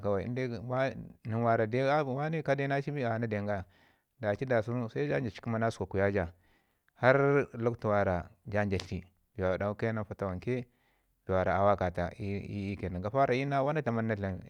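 No technical faults can be heard anywhere in this speech recording. There is no moment in the audio that needs to be marked.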